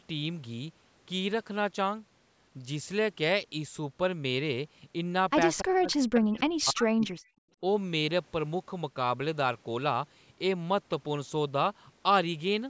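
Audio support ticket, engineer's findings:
Speech dips hard, by roughly 40 dB, from 5.61 to 7.14 s; speech suppressed in double talk, likely the echo canceller ducking the near talker.

Faint delayed copy of the speech at 5.91–5.96 s, trailing 286 ms behind and around 25 dB down; echo leak, likely residual loudspeaker pickup returned by the far end.

Room background drops out by about 34 dB for 70 ms at 7.43–7.51 s; background gated by the echo canceller, which clamped the microphone during playback.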